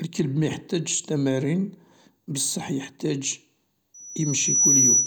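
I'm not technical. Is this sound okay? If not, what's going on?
No. Right after "ميحتاجش تمارين بصح يحتاج", at 3.94 s, a loudspeaker feedback squeal starts: a shrill whistle near 5.9 kHz that swells over under a second and ends up louder than the speech, lasting to the end. A steady electrical whine wouldn't grow like that.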